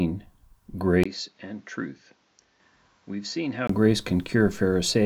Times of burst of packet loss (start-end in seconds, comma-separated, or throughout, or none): none